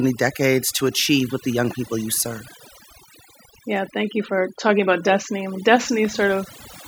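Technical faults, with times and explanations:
Throughout: overdone noise removal. A noise reduction stage was pushed too hard on a noisy speech recording, so every frequency band that sits close to its noise estimate gets pulled far down or switched off, and the softer parts of the voice are taken along with the noise. The background drops to near silence dotted with twinkling specks. The isolated flickering tones in an otherwise dead floor set it apart from plain low-pass dullness or a gate's abrupt on-off pumping.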